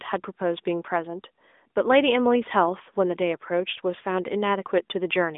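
No technical faults can be heard in this speech.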